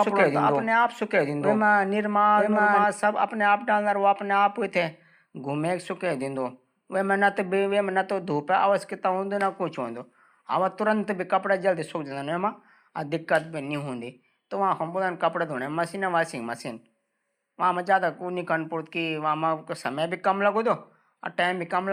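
A second copy of the recording was likely mixed in out of step, picked up again through a slower capture path or left behind by an edit holding two copies, giving a doubled audio track from the very start of the speech to 2.84 s. The copy trails the original by about a second at roughly equal loudness, so every phrase is heard twice, full-band and dry with no reverberant tail, until the duplicate cuts out abruptly at 2.84 s.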